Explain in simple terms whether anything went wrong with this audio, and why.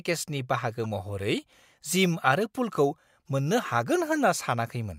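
At 0.84 s a brief glitch cuts into the speech. This is a corrupt frame decoded: a small chunk of the compressed data was damaged, but the player decoded it anyway, so for that one short frame the sound came out at the wrong pitches. Unlike a plain click or a dropout, which is a sharp tick or a moment of silence, this has a tone or noisy texture of its own, lasting roughly one frame.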